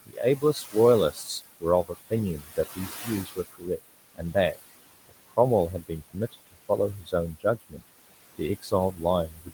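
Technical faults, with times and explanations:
Throughout, noise suppressor artifacts: the background sinks between phrases and swells under them, as the suppressor pulls steady room noise (about 14 dB below speech) down about 19 dB.
0.06–0.75, 1.13–1.29, 1.61–3.79, 4.14–4.57, 5.09–5.38, 5.81–6.70, 7.01–7.83 and 8.38–9.53 s, speech cut by the noise suppressor: quiet consonants and endings sound swallowed, dipping by up to about 21 dB, because the suppressor mistakes faint speech for noise.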